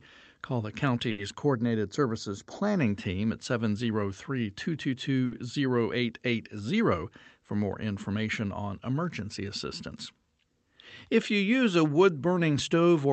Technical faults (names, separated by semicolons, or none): short stall from a late packet; channel delay (comb filtering)